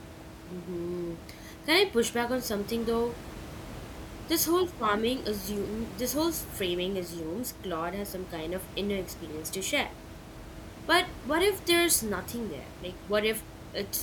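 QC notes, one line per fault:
No faults found; the room noise sitting about 14 dB below the speech belongs to the recording space and is not a system fault.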